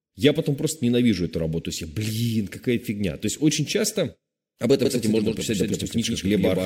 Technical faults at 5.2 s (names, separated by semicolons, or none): doubled audio track